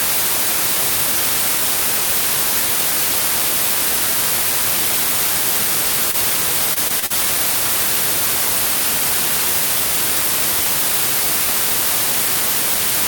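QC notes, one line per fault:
6.11–6.16 s, short concealed packet loss: about 20 ms never arrived, and the receiver extended the preceding sound to bridge it, leaving a brief smear.
6.74–7.12 s, repeated packet loss (robotic sound): four successive gaps, the longest 39 ms, were each patched by continuing the last sound. About a quarter of this stretch is synthetic fill, so it sounds choppy.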